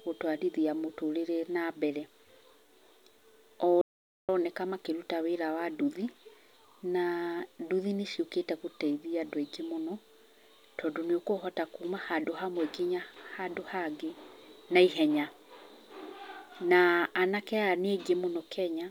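Speech, with an audio dropout to silence from 3.81 to 4.29 s. For 0.47 s the sound cuts to silence with no room tone, likely from a lost input link, then resumes at "makĩruta wĩra wa nduthi". The waveform shows a flat line and the spectrogram a blank column.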